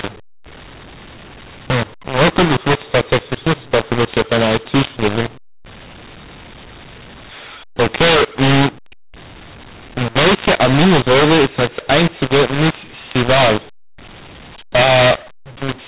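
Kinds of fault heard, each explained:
mu-law and A-law mixed up, throughout: the speech was coded with G.711 A-law but read back as mu-law, so every 8-bit code lands on the wrong level. Loudness steps are scrambled, the speech sounds harsh and distorted, and pauses fill with noise.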